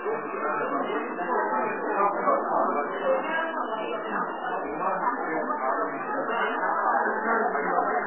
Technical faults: MP3 compression

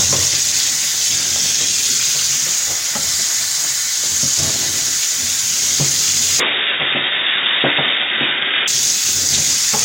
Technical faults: input switched to a poorer device

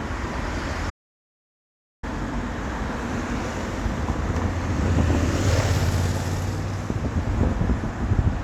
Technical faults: audio dropout to silence

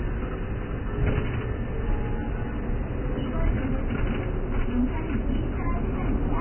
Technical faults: Vorbis compression

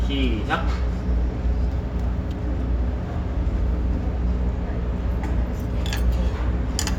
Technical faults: mains hum

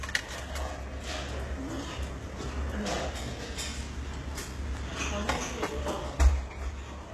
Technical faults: HE-AAC compression

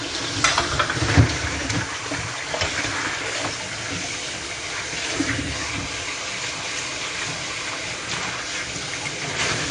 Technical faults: AAC compression

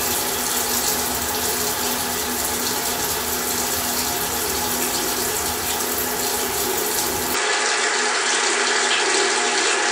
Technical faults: input switched to a poorer device

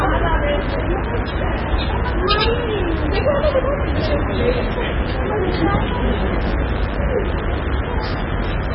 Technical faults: mains buzz; MP3 compression

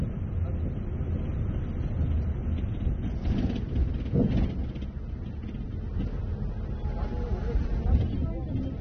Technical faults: AAC compression

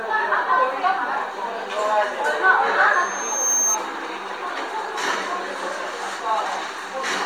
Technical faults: loudspeaker feedback squeal

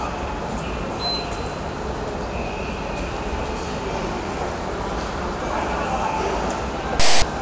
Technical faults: file tags played as audio

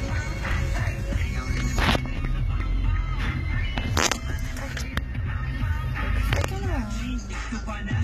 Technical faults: HE-AAC compression

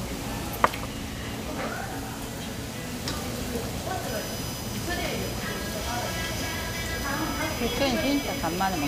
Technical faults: USB whine

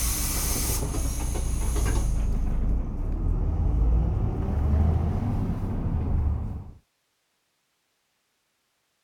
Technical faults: none

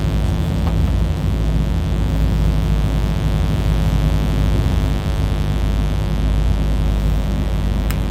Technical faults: mains buzz

